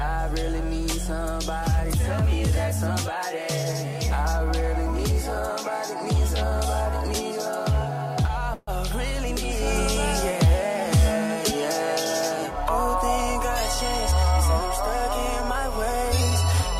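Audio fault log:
8.53–8.69 s call audio freeze: 140 ms of fading fill, likely from delayed packets draining the jitter buffer; the audio then resumes intact, 140 ms later.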